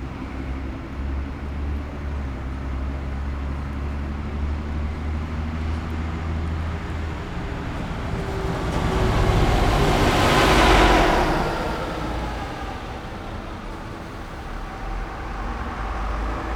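From 8.74 s to the end, the clip carries a doubled audio track: a second, full-band copy of the sound runs roughly 200 ms behind the first at about the same level, with no decay or room colouring. The likely cause is the audio being picked up again through a slower path. It starts abruptly. On a waveform each transient is followed by a matching twin, and a spectrogram shows every event repeated about a fifth of a second later at equal brightness.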